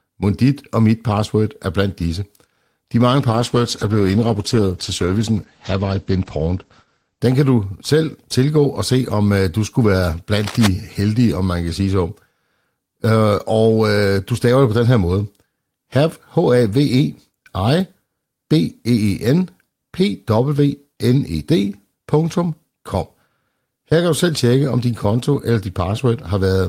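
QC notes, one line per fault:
3.31–7.27 s, call bitrate drop: the speech turns coarse and muffled for about 3.9 s, then clears. The encoder was pushed from 32 kbps down to 12 kbps, so it spends far fewer bits per frame and quantises the spectrum more crudely, giving a rough, watery texture. At that rate the coded bandwidth also narrows from about 20 kHz to about 8 kHz, which removes sibilance and air and accounts for the dull, boxy tone until the rate recovers.
10.38–10.67 s, cable scratch noise: a short burst of dense, irregular crackle and rustle sits over the speech for just under 0.3 s, only moderately quieter than the speech itself, roughly 10 dB down. The uneven, granular texture points to a likely worn cable, connector or control being moved, with its contact resistance fluctuating rapidly and modulating the signal path. The disturbance is brief and stops once the contact settles.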